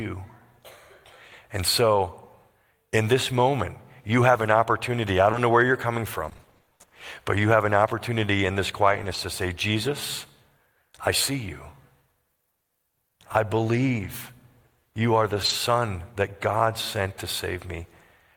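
Scattered short gaps affect the speech from 4.33 to 9.15 s, where about fifteen tiny dropouts, none longer than about 20 ms, are concealed by extending the preceding sound, leaving brief ticks and smears. From 12.55 to 15.51 s, a few more gaps occur, the longest near 70 ms, heard as brief hiccups.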